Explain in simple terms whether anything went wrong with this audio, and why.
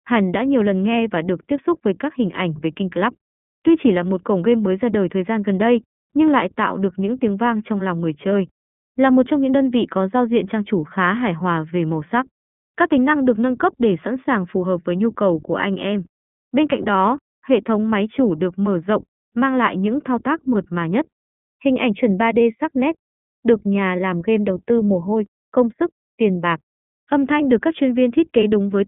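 Throughout the speech, from start to finish, the audio has gone through the iLBC codec, a phone-call style compressor. It keeps only a narrow band, roughly 150 Hz to 3.4 kHz, so voices sound thin and muffled. The damage is plainly audible: each 20 ms slice is rebuilt on its own, leaving a slightly rough, synthetic edge. That graininess sets it apart from a simple muffling filter, which dulls the sound but keeps it smooth and natural.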